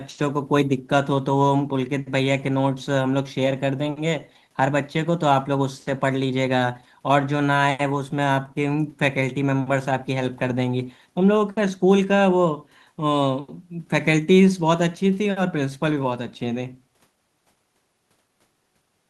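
Listening through the speech recording, nothing stood out as a technical problem at any point.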